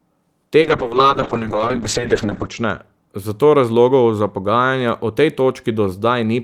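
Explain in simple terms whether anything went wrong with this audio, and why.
From 0.61 to 2.84 s the speech turns muffled and rough until "zato razlogov za pogajanja": a call bitrate drop, where the encoder was starved of data.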